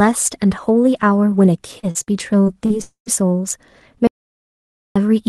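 From 1.79 to 2.73 s, packets are repeatedly lost or late, causing repeated packet loss with a robotic sound. Five holes, the longest 40 ms and about 200 ms in total, are patched by stretching the preceding sound, so roughly a fifth of this span turns choppy and robotic, with fragments missing.

Between 2.82 and 3.09 s a long network dropout is the likely cause: about 240 ms of audio never arrives. The receiver extends the last sound as a fading buzz or hiss, the final 100 ms settles into silence, and the audio resumes without the lost portion.

From 4.07 to 4.96 s the input is lost and silence is written, an audio dropout to silence, probably from a disconnected device or failed link. The sound cuts off abruptly into about 0.88 s of total silence with no room tone, then returns mid-flow with that stretch gone.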